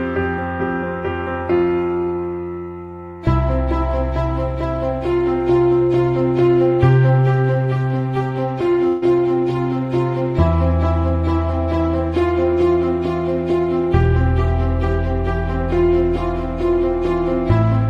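A burst of packet loss hits the audio at 8.87 to 9.04 s. About 143 ms is concealed by extending the last sound and fading it down into a held buzz or hiss, and playback then resumes with roughly 140 ms of the original missing.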